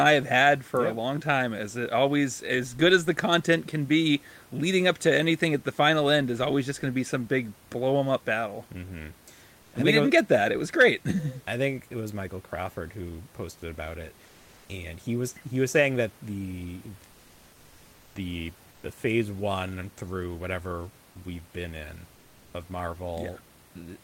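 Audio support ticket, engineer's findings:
Comfort noise in place of the background, three pauses:
9.61–9.73 s (120 ms), before "we didn't was get".
14.25–14.69 s (440 ms), between "who posted about it" and "and he was he".
17.11–18.15 s (1.04 s), after "was saying that the".

Real room texture (about 33 dB under speech) swapped for smoother synthetic noise. Level shift about +1 dB, none, about −2 dB. Likely Opus DTX: sender halts transmission in silence, receiver fills gap with shaped synthetic noise.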